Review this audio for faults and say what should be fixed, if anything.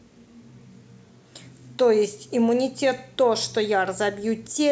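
Nothing here needs fixing; the speech comes through without any technical faults to flag.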